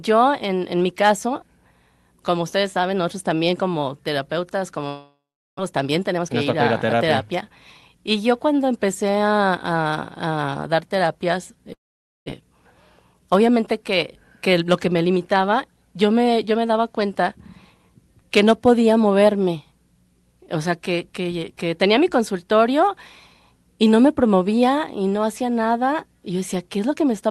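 A speech recording with two gaps, at 4.87 to 5.61 s and 11.73 to 12.30 s, where the last sound trails off as a fading buzz before going quiet, and about 0.4 s of speech never comes back. That's most likely a long network dropout, with concealment filling the hole until it gives up. After each gap there's a jitter buffer speed-up: 5.69 to 8.15 s runs about 12% fast, trimming roughly 0.3 s, then 13.13 to 13.94 s and 14.53 to 15.36 s each run about 6% fast, dropping around 50 ms. The pitch stays put but the delivery sounds hurried.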